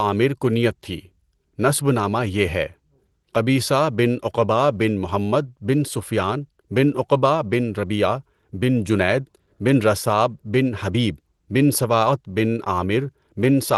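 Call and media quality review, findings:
No faults found.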